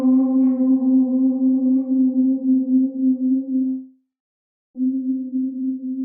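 The clip is a recording of everyday sounds. From 3.67 s to 4.78 s there is a long network dropout. The last sound is stretched into a buzz or hiss that fades away. About 0.69 s of that stretch is only silence or a low steady noise. The sound then returns, but roughly 1.08 s of it is gone. The likely cause is that no audio reached the receiver for over a second, so it filled the gap itself.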